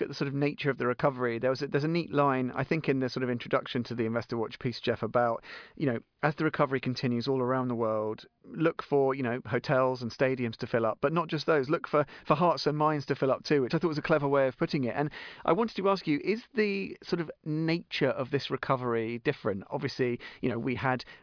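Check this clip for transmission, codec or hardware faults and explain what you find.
No transmission, codec or hardware faults can be heard in this speech recording. Nothing in the audio points to trouble in the recording or delivery chain.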